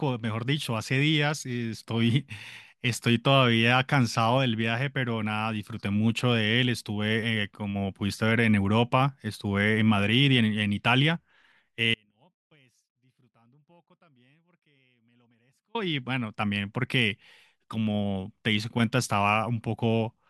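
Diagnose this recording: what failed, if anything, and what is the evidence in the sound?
There's an audio dropout to a faint residue from 11.94 s to 15.75 s. The speech cuts out abruptly for about 3.8 seconds, leaving only a faint trace roughly 40 dB down. Since the path stayed live, it's likely an intermittent analogue connection upstream.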